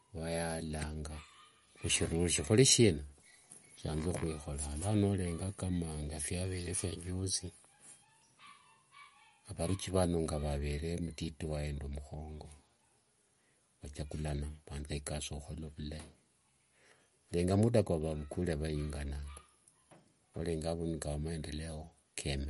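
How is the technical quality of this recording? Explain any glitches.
The speech has plainly audible coding damage from start to finish. It is likely MP3 compression at a low bitrate, around 48 kbps. Nothing remains above 11.2 kHz, and weak frequency lines flicker between frames, giving a watery, swirly texture and metallic s sounds.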